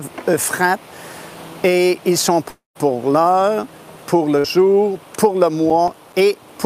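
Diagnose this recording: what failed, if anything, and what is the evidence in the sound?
From 2.49 to 2.77 s the sound turns into a fading buzz or hiss, then about 140 ms of near-silence, and resumes with roughly 260 ms gone. The spectrogram shows smeared, decaying bands, then a blank column. This is likely a long network dropout, with the receiver's concealment stretching the last sound before giving up.

At 4.39 to 4.46 s a burst of packet loss, on the network side, removes about 60 ms. The last sound is held and faded for about 50 ms before audio picks up further on. The waveform shows a shrinking envelope, and the spectrogram shows a smeared continuation of the last sound ending in a hard restart.

Between 5.70 and 6.14 s there is processor overload crackle at the driver or buffer stage. A handful of missed deadlines, each leaving a short silent hole that fits a buffer of about 5 ms, produce gritty tearing. 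The waveform shows brief flat dropouts with sharp edges, and the spectrogram shows thin vertical broadband clicks.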